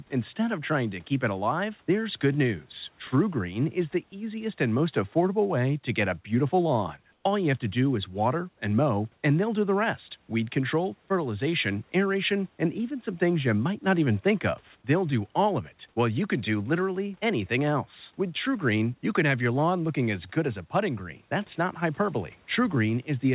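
At 7.12 to 7.24 s, just after "get a beautiful lawn", the background for 120 ms turns into a smooth, featureless hiss about 2 dB quieter, likely comfort noise in place of the background while transmission paused. On a spectrogram, the detailed texture becomes a flat, uniform band below 4 kHz.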